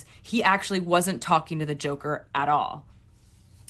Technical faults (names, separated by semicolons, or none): short concealed packet loss